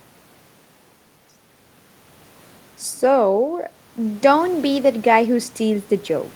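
No technical faults can be heard anywhere in the recording.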